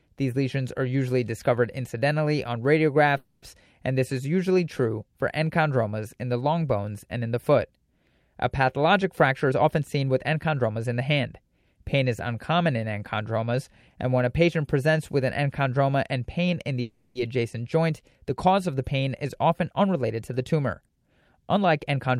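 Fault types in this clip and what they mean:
call audio freeze: At 3.17 to 3.44 s, after "usually discovered incidentally on", and at 16.81 to 17.17 s, after "enchondroma and pain in", the last sound stretches into a fading buzz, with a brief silence the first time. Likely the jitter buffer ran dry. Speech then resumes intact.
jitter buffer speed-up: The receiver cut short pitch-period slices to drain an overfull buffer. Speech hurries at the same pitch. It runs at 113% at 9.24 to 11.10 s, 107% at 19.25 to 20.40 s after "cause of the pain", 169% at 20.86 to 20.97 s, and 113% at 21.46 to 22.17 s.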